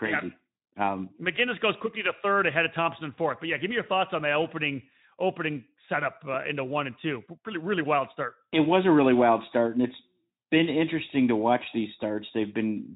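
There are no technical faults to describe in this speech at any point in time.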